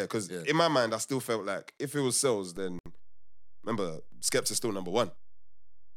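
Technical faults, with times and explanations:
2.57 s to the end, DC step: Just after "if it was sales", the waveform's zero line jumps to a new offset and stays there for the rest of the clip. The sudden shift is heard as a single low thump, while the speech continues unchanged.
2.79 to 2.86 s, gap at a join of encoded pieces: Two separately encoded segments were spliced without trimming the encoder's start delay and final-frame padding. This leaves a 68 ms hole in continuous speech shortly after "if it was sales", with smeared edges, before the speech resumes where it stopped.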